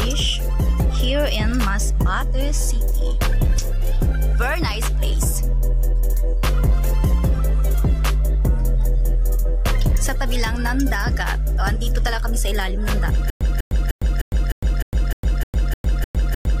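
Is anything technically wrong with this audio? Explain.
Yes. From 13.3 s to the end, the audio breaks into a stutter with silent gaps. A fragment of about 198 ms plays, then about 107 ms of digital silence follows, and the pair repeats every 304 ms or so, eleven times. The likely cause is a stalled player or stream that replays its last buffered piece at each retry and then runs dry, so the audio meant for that stretch never arrives. On a waveform it shows as identical blocks separated by flat silent gaps. A spectrogram shows the same vertical slab pattern repeating with blank columns between.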